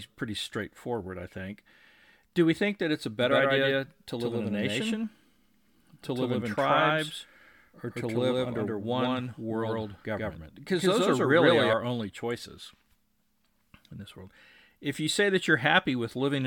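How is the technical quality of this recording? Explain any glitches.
The recording has one significant fault, a doubled audio track, running from 3.21 s, just after "think that it's a", to 11.73 s, just before "only choices". Across that span a second, full-band copy of the speech trails the original by roughly 150 ms at about the same level, producing a dry slapback echo with no reverberant tail. It cuts in and out abruptly at both ends, most likely because the signal was captured twice, once through a slower path.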